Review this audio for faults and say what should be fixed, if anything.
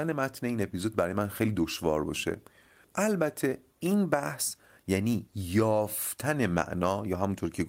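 No faults found in the speech; nothing needs fixing.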